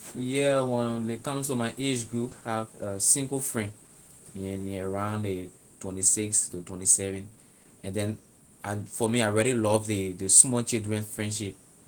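A skip ahead occurs at 2.31 to 2.33 s, right after "to my age group". Speech was dropped while later audio was already waiting, probably when the jitter buffer overflowed. Roughly 0.7 s of talk is lost with no fill, and the two sides butt together abruptly.

A jitter buffer speed-up follows from 2.41 to 4.09 s. The receiver was holding too much audio and kept trimming short pitch-period slices to shrink the delay. Speech runs at 110% speed with unchanged pitch and sounds hurried, shedding about a fifth of a second overall.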